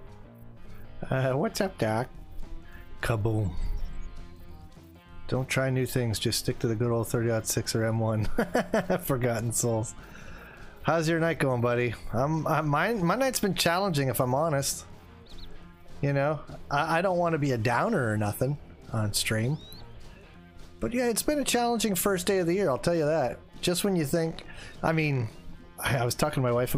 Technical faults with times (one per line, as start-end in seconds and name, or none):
none